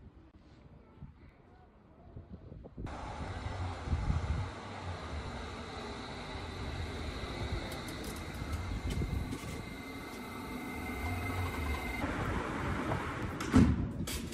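Short clicks or tiny skips land at 1.29, 7.26, 9.24, 11.23 and 13.23 s, the last four roughly 2 s apart. This is overlap between stream segments: the 2 s segments' time stamps overlap, so between 4 and 16 milliseconds are trimmed and the waveform jumps.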